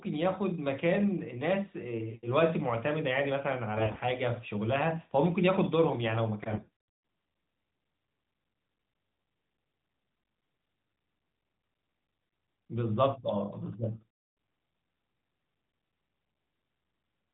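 From 3.78 to 4.03 s and again from 6.52 to 6.70 s, AMR bit errors in the narrowband speech, with roughly a fifth and then about 15 percent of less-protected bits flipped, turn the voice hoarse, scratchy and gargly at steady pitch and level.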